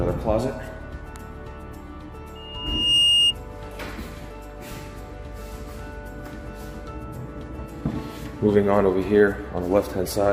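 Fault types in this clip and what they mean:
Loudspeaker feedback squeal: 2.35 to 3.35 s, a microphone hears its own loudspeaker and loop gain passes unity at 2.8 kHz, swelling over roughly 0.7 s to about 10 dB above the sound.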